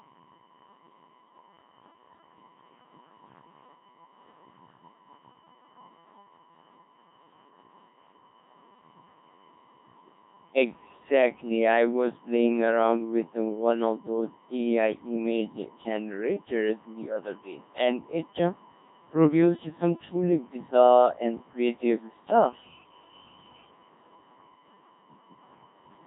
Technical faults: USB whine; Codec 2 vocoder

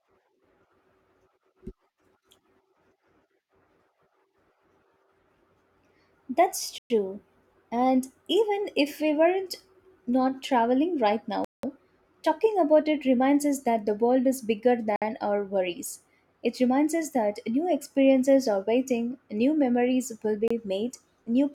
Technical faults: Bluetooth stall

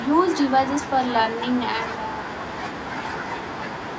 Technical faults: none

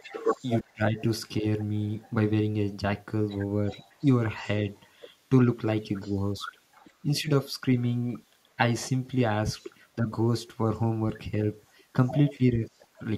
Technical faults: echo leak; speech suppressed in double talk

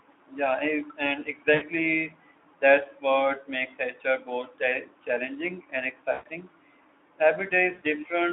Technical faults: VoIP packet loss concealed by the speech codec

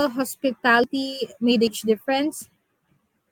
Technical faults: dropped buffer (overrun)

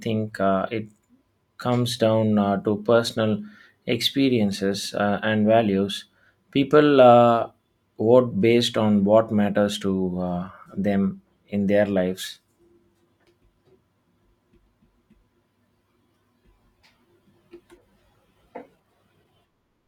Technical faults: none

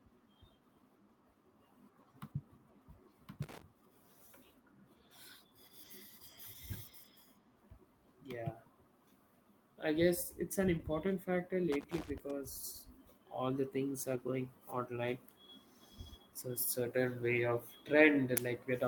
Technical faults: loose connector crackle; lost packet rebuilt from error correction

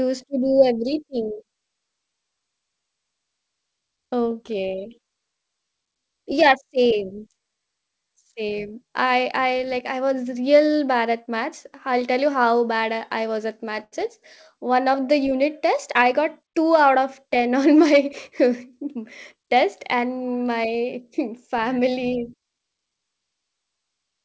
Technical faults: short stall from a late packet

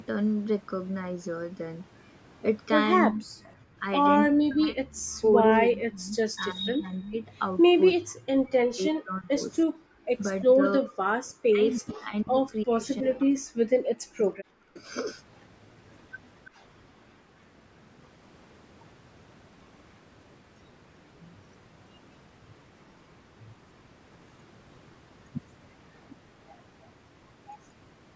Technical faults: speech suppressed in double talk; echo leak; background gated by the echo canceller

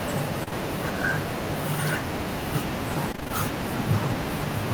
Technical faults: short concealed packet loss; repeated packet loss (robotic sound)

